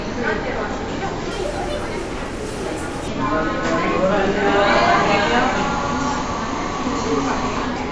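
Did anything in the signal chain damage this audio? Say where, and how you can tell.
Yes, at playback. From 1.31 to 3.08 s the sound runs about 1.38 times too fast and sits about 5.5 semitones high. That is a wrong sample rate. Speed and pitch rise together by one ratio, which fits 16 kHz material played at 22 kHz without conversion.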